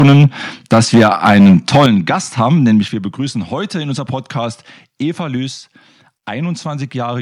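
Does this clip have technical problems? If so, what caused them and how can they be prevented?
Yes. Microphone overload distorts the speech from 0 to 0.26 s and from 0.72 to 1.86 s. Peaks run about 7 dB and about 6 dB past full scale. Roughly a third, then a tenth, of the waveform is flattened. That gives a harsh crackle. Too much input gain is the likely cause.

The microphone volume steps down at 0.03 s by about 2 dB, at 1.86 s by about 7 dB, and at 2.88 s by about 6 dB, between "haben nämlich" and "wir begrüßen heute in". Each time, speech and background drop together, likely from the call software automatically lowering the input gain after clipping.

Set the input gain so loud syllables stay well below full scale, and turn off automatic microphone level adjustment.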